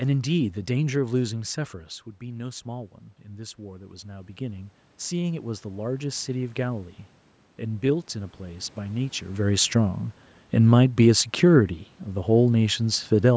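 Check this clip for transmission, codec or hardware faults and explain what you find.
One fault stands out: automatic gain rising, from 2.19 s to 7.01 s. After the talker moves back around 2 s and the voice drops by about 10 dB, the gain control slowly raises its gain by about 9 dB. Voice and room noise swell together over those seconds, which separates this from the talker simply coming closer again.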